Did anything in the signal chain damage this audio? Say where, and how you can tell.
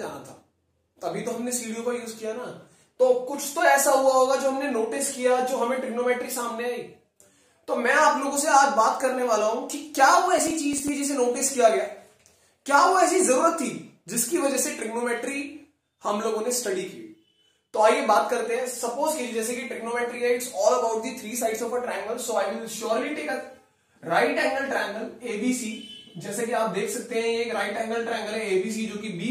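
Yes. Between 10.38 and 10.89 s there is a burst of processor overload crackle, a gritty tearing laid over the sound that stops once that half-second passes. The damage is at the driver or buffer stage. The processor fell behind and missed a run of buffer deadlines. Each missed buffer came out as a short silent gap with hard edges. The spacing of the clicks points to very short buffers of roughly 3 ms, and a handful of them dropped in quick succession.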